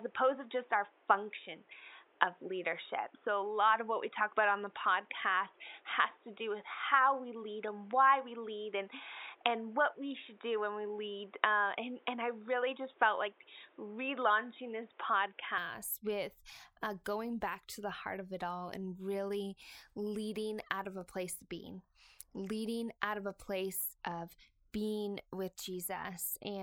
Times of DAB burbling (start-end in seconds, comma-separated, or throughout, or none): none